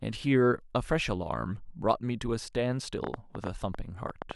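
From 3.04 s to 4.32 s a train of clicks sits over the speech: roughly ten sharp pulses of near-identical shape, arriving at about 7.1 per second but at uneven spacing, so they read as an irregular ticking rather than a steady buzz. They stand well above the programme, on the order of 15 dB louder, and remain audible through gaps in the speech. The likely cause is interference from nearby equipment or a faulty connection or power supply injecting pulses into the signal path.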